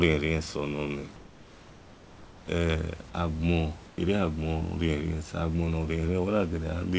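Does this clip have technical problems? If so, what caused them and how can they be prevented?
Yes. From 1.16 to 2.48 s, and again briefly from 3.88 to 3.98 s, the room's background, sitting about 23 dB below the speech, is replaced by comfort noise: a steady, featureless hiss about 3 dB quieter than the real background. The likely cause is discontinuous transmission, where the sender stops sending during pauses and the receiver synthesises noise. Unlike a noise gate or a dropout, the gap never falls silent; only its texture and level change. Disabling DTX on the sending side prevents it.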